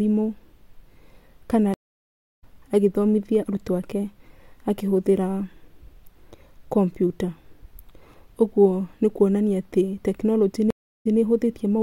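At 1.74 s a stream reconnect breaks the speech. The link drops, leaving 0.63 s of silence. A fresh decoder resumes about 0.7 s further on, at "agĩthomithia arutwo ake". At 10.70 s another reconnect gives 0.32 s of silence, then restarts 0.16 s earlier, repeating a moment.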